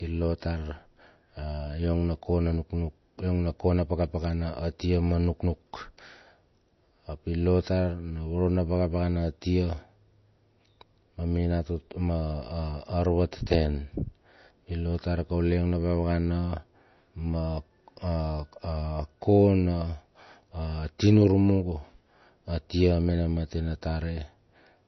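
Throughout the whole speech recording, the top end stops dead at 6 kHz, which makes the sound dull and band-limited despite its large file size. This is low-bitrate audio saved at a high bitrate, likely an MP3 at around 32 kbit/s re-encoded as a 256 kbit/s MP3. The second pass could not restore what the first discarded. On a spectrogram, energy ends at a flat, sharp ceiling at 6 kHz with nothing above it.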